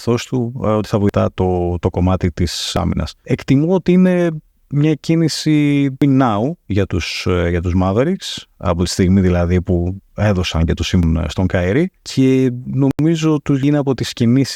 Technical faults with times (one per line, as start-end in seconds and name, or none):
1.09 damaged data in a compressed stream
2.77 damaged data in a compressed stream
6.02 damaged data in a compressed stream
11.03 damaged data in a compressed stream
12.91-12.99 block of digital silence
13.63 damaged data in a compressed stream